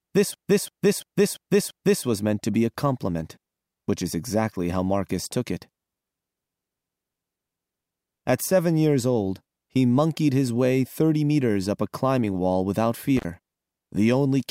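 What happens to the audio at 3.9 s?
Nothing goes wrong at 3.9 s: the speech carries on intact through that moment, with no dropout, click, distortion or other fault to be heard.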